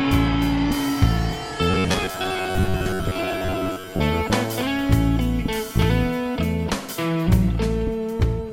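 From 1.71 to 4.04 s, the music takes on a robotic sound from repeated short buffers. A rigid, metallic buzz near 94 Hz is imposed on it. This likely comes from late audio being covered by repeating roughly 11 ms fragments, with about half the real sound skipped.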